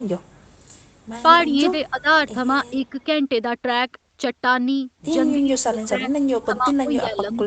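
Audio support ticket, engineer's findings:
Speech suppressed in double talk: speech level dips at 1.9–2.07 s (about 15 dB), 5.39–6.08 s (deepest, about 20 dB, roughly half a second affected) and 6.44–7.46 s (about 15 dB). Likely echo canceller ducking the near talker during overlap. Real speech goes missing, with no added copy, unlike a leak.

Echo leak: a faint delayed duplicate of the speech, about 35 dB down, trailing by about 300 ms at 2.75–3.05 s and 7.34–7.38 s. Likely residual loudspeaker echo passed by the far-end canceller. This adds a copy rather than removing speech.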